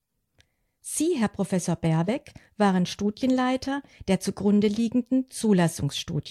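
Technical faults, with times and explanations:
Nothing stood out as a technical problem on listening to this speech recording.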